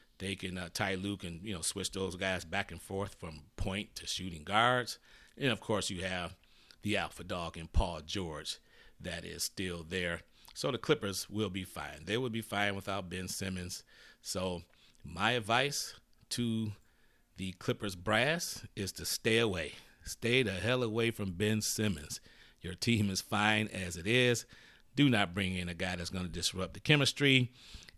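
No technical faults are audible anywhere in the recording.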